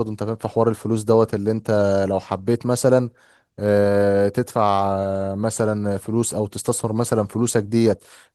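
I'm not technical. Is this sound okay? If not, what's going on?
Yes, there's nothing wrong here.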